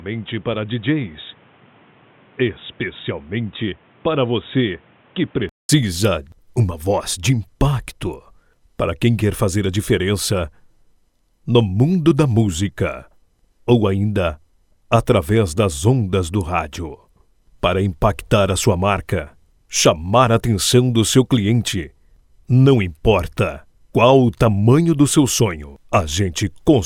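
From the start to 5.69 s, the audio sounds dull and boxy, with nothing above 3.8 kHz. It is slightly quieter and carries its own background noise. A 200 ms silence marks the return to full band. The likely cause is an input switched to a poorer device.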